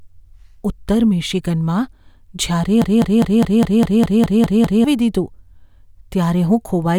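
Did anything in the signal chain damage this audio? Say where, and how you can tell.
Yes. The playback or streaming buffer likely stalled and kept re-sending its last block, producing a broken-record loop. From 2.82 s to 4.84 s, an identical 203 ms fragment of speech repeats ten times back to back, and the audio for those two seconds is lost.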